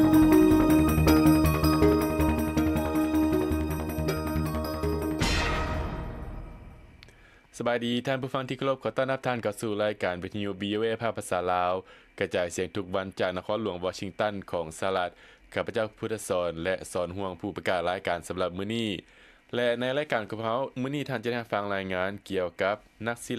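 From 18.5 s to the end at 23.39 s, a resampler restarted on every block produces regular ticks at 4 Hz, one per 250 ms block edge in the 44.1 to 48 kHz conversion. Unlike dropout clicks, they keep strict timing and vanish when the sound stops.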